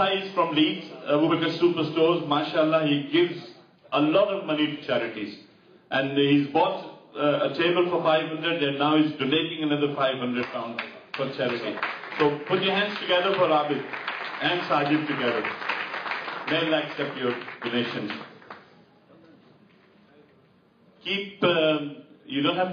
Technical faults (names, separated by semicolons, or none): damaged data in a compressed stream